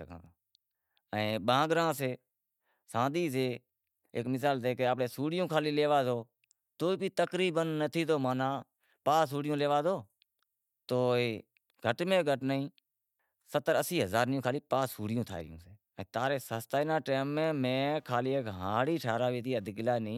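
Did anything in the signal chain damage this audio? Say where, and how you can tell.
Yes: analogue wiring. Computer activity noise, a buzzing chirp pulsing around 200 Hz, roughly 45 dB below the speech, appears from 16.84 to 20.12 s. It shows as faint vertical striations on a spectrogram, riding a shared ground under computer load.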